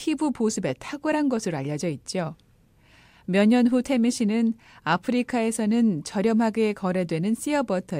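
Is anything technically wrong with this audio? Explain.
No, there's no technical fault to report in this speech recording.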